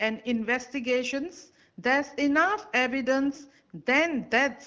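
No faults heard in this speech; the band stops at 8 kHz as expected from call microphone processing, and the AMR wideband (HD Voice) coding sounds consistent with one of its higher, clear-speech rates.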